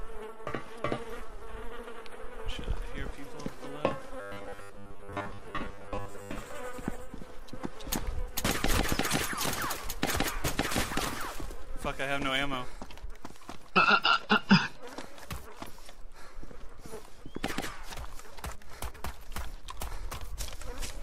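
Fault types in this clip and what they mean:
Robotic sound from repeated short buffers: Between 4.21 and 6.38 s the sound turns into a rigid, metallic buzz at 100 Hz. Most of that stretch is repeated material. The likely cause is a 10 ms chunk replayed while fresh audio arrived too seldom.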